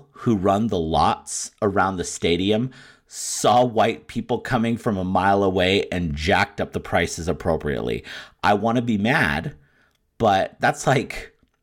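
A speech clip with a short stretch of channel delay (comb filtering) from 0.92 to 2.75 s, starting just after "who run the" and ending before "saw white people coming". One channel lags the other by about a single sample, a few hundredths of a millisecond, and summing them to mono puts the first cancellation notch up near 20 kHz. The result sounds dull at the top rather than hollow. A spectrogram shows the top band darkening over that span, while the waveform looks essentially unchanged.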